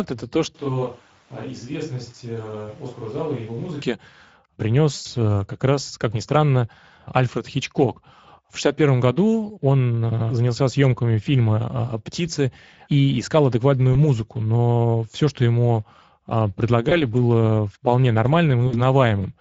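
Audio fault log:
throughout, Speex codec: At about 16.8 kbps the CELP coder has too few bits to model the excitation properly, so the sound is plainly degraded. It has a noisy, hoarse texture.
0.55–3.81 s, switch to a distant microphone: The speech suddenly turns roomy and hollow and loses bass. The level drops by about 10 dB and room noise rises to about 25 dB below the speech. This is likely a fallback from the close microphone to one further away. The return at 3.81 s is equally abrupt.
4.95–5.06 s, 13.93–13.96 s, 16.89–17.01 s, 18.67–18.81 s, VoIP packet loss concealed by the speech codec: Each gap is filled by the decoder extending its last pitch and filter with falling gain, which produces a brief buzzy or noisy, fading smear. The lost audio was about 100 ms at 4.95 s and about 60 ms at 18.67 s. At 13.93 s, between "и искал адекватную" and "музыку но все что", about 20 ms was lost, which fits a single missing frame. 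Another single-frame gap of about 20 ms falls at 16.89 s, between "все что ему а" and "было вполне", and the sound stays weak until 17.01 s. The last event comes right after "было вполне". After each gap the speech recovers over tens of milliseconds rather than at once.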